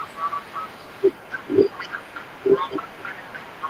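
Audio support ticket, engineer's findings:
Other side's voice leaking through, whole clip, 0 to end. Faint second voice sits under the talker, roughly 15 dB down. Likely residual echo: far-end loudspeaker reaching the mic, and the echo canceller isn't cleaning all of it out.

Speech suppressed in double talk, 2.58 to 2.74 s and 3.09 to 3.19 s. Talker dips hard, around 15 dB then about 10 dB, for short bursts. Likely the echo canceller misreading overlap as echo and ducking the near-end speech.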